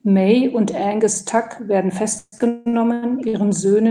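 From 2.15 s to 3.35 s the speech hits repeated stalls (stutter): packets arrived late, the jitter buffer kept emptying, and the receiver held the last sound seven times, about 45% of that stretch, with the longest hold 178 ms. Nothing is lost, but the speech drags and hiccups. A spectrogram shows frozen, horizontally smeared patches where harmonics stop moving, the longer ones fading. The waveform shows repeated, periodic-looking blocks with a dwindling envelope.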